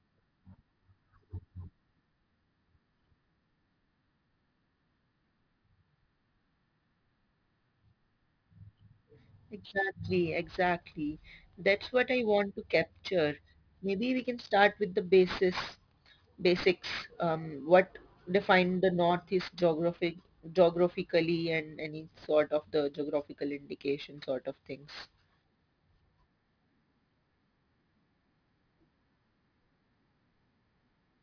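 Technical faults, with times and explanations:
Throughout, aliasing: sibilants fold back below 5.5 kHz as metallic grit roughly 20 dB down, which fits unfiltered resampling to 11 kHz; the spectrogram runs hard to the band edge.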